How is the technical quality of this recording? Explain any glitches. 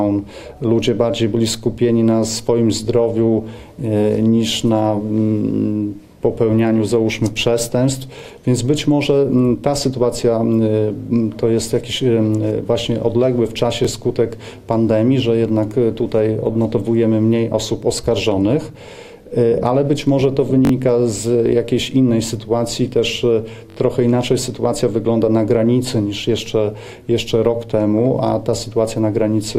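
Four short stutters mark the recording, all of them repeated buffers. At 8.19 s and 13.85 s a 21 ms piece of sound plays twice. At 20.65 and 23.70 s it plays four times, for about 64 ms each. The joins are hard, and each event sounds like a quick stutter. The cause is new audio arriving late, so the device replayed its last buffer, which fits a 1024-sample buffer. No sound appears to be skipped.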